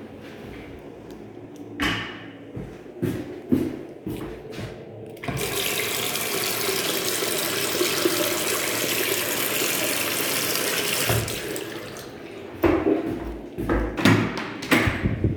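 At 1.44, 3.42, 7.38, 11.34 and 13.32 s the sound skips briefly. Each skip removes a tiny slice, roughly 20 ms. The two sides butt together with no silence between them. The jumps sit on a 2-second grid. That points to audio missing between chunks. The likely cause is a recorder or processor handling 2-second blocks. It drops a sliver each time it closes one block and opens the next.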